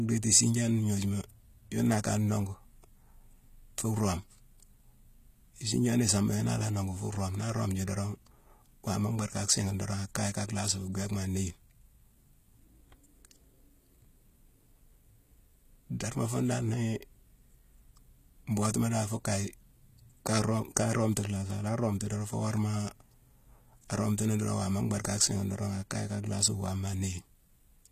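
From start to finish, the speech carries plainly audible codec damage whose treble sounds synthetic rather than missing. That points most likely to HE-AAC compression at a bitrate around 20 kbps, where spectral band replication copies lower bands upward instead of coding the real highs. What separates it from a plain low-pass or MP3 loss is that the top stays bright up to a cutoff near 14.9 kHz, yet s sounds come out gritty, metallic and lispy.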